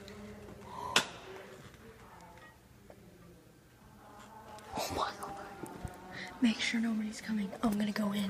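No technical faults can be heard anywhere in the audio.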